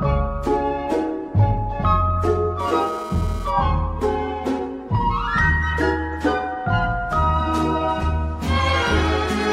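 A hard, raspy GSM phone buzz runs from 2.60 to 3.51 s, about 18 dB below the sound, pulsing at 217 Hz with dense harmonics. A nearby 2G handset's transmit bursts are being rectified in the audio circuitry, and this single short burst fits a data transfer.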